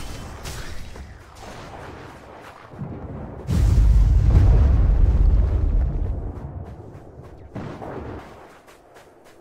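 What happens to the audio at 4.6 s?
At 4.6 s the audio sits inside a stretch of de-emphasis applied wrongly, running from 2.72 s to 8.19 s. A treble cut meant to reverse pre-emphasis was applied to material that either had none or had already been corrected, so the response tilts smoothly downward, about 11 dB lower at 10 kHz than at 1 kHz. The result is dull and muffled. Unlike a low-pass filter, there is no sharp cut-off, only a gradual slope.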